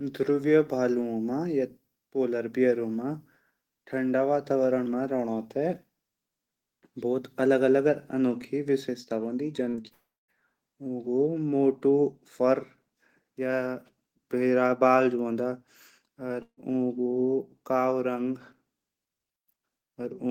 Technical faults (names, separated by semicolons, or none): repeated packet loss (robotic sound); long network dropout; burst of packet loss